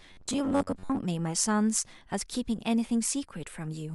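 From 0.01 to 0.99 s the speech turns into robotic sound from repeated short buffers, a rigid metallic buzz at 93.8 Hz. About half the audio is likely replayed 10.7 ms chunks. The waveform shows identical repeating cycles; the spectrogram shows evenly spaced, fixed harmonic lines.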